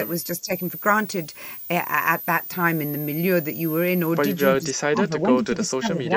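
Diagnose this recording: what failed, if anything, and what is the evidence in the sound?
Switching supply whistle, present throughout the clip: a high whistle sits in the analogue wiring or power stage, wandering between about 12.5 kHz and 16.5 kHz and centred roughly on 15 kHz. It stays only about 10 dB below the speech. A switching regulator running in burst mode, or two supplies beating, couples its switching frequency into the audio path, and its pitch shifts as the load changes.

Speech suppressed in double talk, from 0.39 to 0.5 s and from 4.58 s to the end at 6.17 s: the speech level dips, by about 15 dB in the short first dip and by around 30 dB in the long second stretch, which runs for about a second and a half. The likely cause sits in call processing. An echo canceller facing both sides talking at once could not separate the near talker from the loudspeaker echo, so it attenuated everything.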